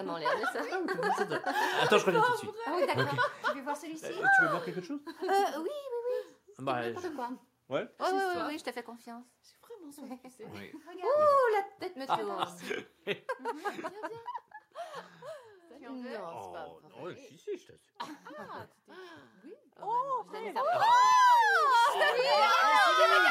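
No technical faults can be heard anywhere in this recording of sounds.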